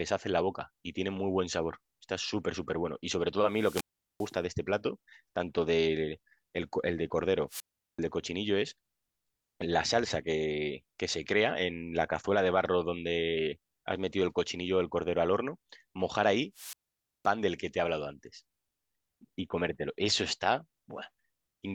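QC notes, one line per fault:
3.48–4.38 s: wireless microphone squelch dropout. The FM link fades, hiss rises, then the receiver's squelch mutes the output for about 0.40 s before the speech returns.
7.48–7.99 s: wireless microphone squelch dropout. Same mechanism. The signal falls below the squelch threshold, leaving a hole of near silence of about 0.39 s.
16.54–17.28 s: wireless microphone squelch dropout. This is the longest mute, about 0.52 s, preceded by static as the carrier weakens.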